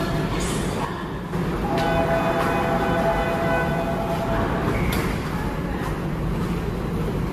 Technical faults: generation loss; one channel drops out

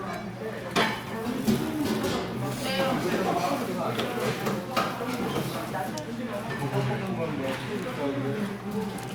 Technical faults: none

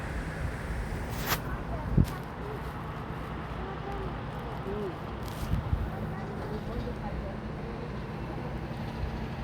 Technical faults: none

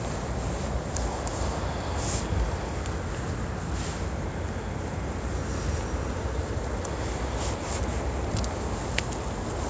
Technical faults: none

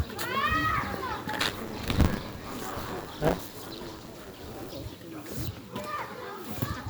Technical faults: buffer tearing

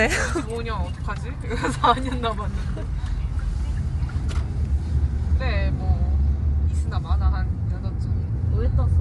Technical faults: Bluetooth LC3 compression

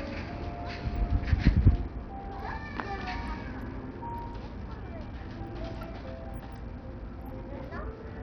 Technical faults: Bluetooth SBC compression

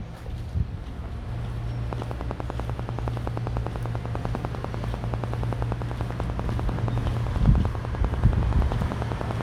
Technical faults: train of clicks

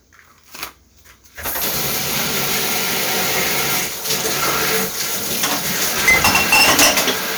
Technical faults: hard clipping

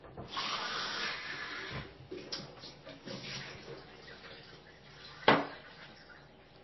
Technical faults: transcoding between lossy codecs

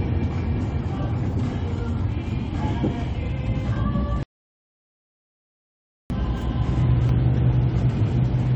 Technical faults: rebuffering stall

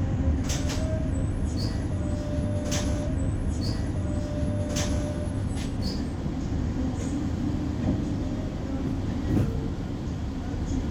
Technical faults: stream segment repeated

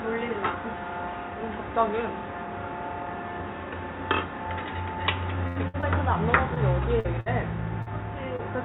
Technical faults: burst of packet loss; short concealed packet loss

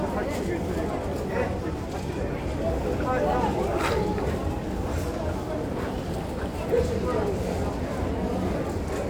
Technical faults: none

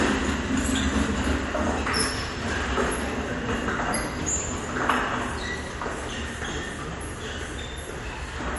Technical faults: MP3 compression

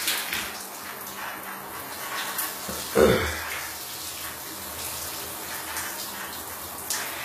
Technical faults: HE-AAC compression

